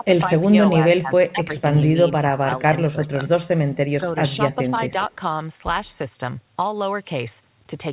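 From 0.0 to 0.19 s, 0.4 to 2.63 s, 2.86 to 3.15 s, 3.98 to 4.2 s and 4.62 to 5.27 s, the speech dips and breaks into pieces, most likely speech suppressed in double talk by an echo canceller muting both sides. The deepest cuts reach roughly 15 dB in the long stretch and nearer 5 dB at the end. The waveform shows chopped, shrunken envelopes; the spectrogram shows the harmonics fading in patches below a band limit at 4 kHz, which points to a G.711 call codec.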